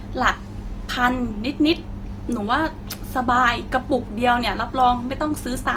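Throughout the speech, the sound is grainy and rough, with high-frequency detail turned into a fizzing, noisy texture. This is the likely mark of Opus compression in its music (CELT) mode, at a rate that fits about 24 kbps. Band energies are kept and starved bands are refilled with folded or noise content. So, unlike MP3, there is less swirling or watery warble. Unlike Opus's speech mode, the top isn't muffled: content reaches about 20.2 kHz.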